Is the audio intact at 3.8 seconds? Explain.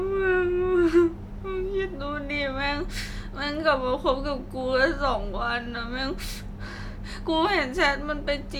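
Yes, the speech at 3.8 seconds is intact, with no technical fault at that moment.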